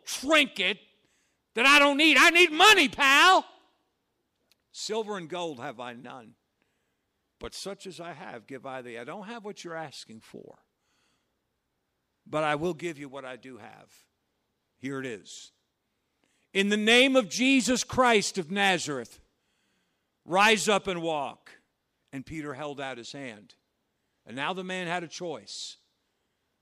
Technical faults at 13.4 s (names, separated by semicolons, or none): none